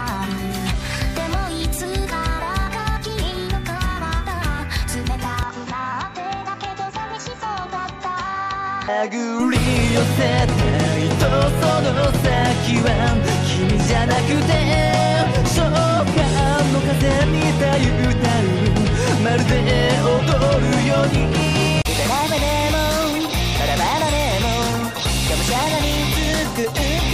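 From 5.43 to 9.40 s the sound turns duller and a little quieter, with nothing above 7.6 kHz, plus a faint new background noise, then clears up again. There's no gap at either switch. It's likely the input switched to a poorer device.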